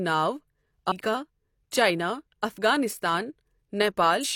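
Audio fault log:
0.88 s and 4.20 s, compressed frames skipped: the sound jumps ahead by roughly 200 ms the first time and around 700 ms near the end. The jumps fit whole frames of about 43 ms being dropped.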